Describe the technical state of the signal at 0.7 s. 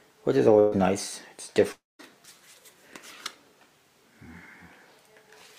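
A burst of packet loss runs from 0.59 to 0.74 s: consecutive packets never arrived in time, so the receiver stretched the last sound across about 124 ms, fading it out, before playback resumed roughly 120 ms further on with that stretch missing.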